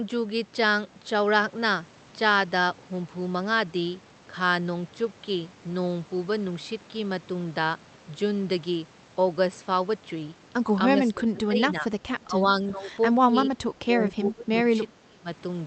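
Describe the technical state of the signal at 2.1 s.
At 2.1 s the speech is intact, with nothing beyond the ordinary coding character of the call path it travelled through.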